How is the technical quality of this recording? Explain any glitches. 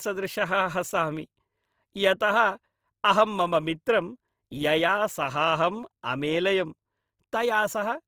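The recording carries audible codec damage from start to finish. Opus compression, throughout: the likely cause is an Opus encoder in its CELT music mode at a rate that sounds like around 24 kbps. It keeps each band's energy but fills starved bands with folded or noise content, so the speech sounds grainy and rough. The full bandwidth stays open up to about 20.2 kHz.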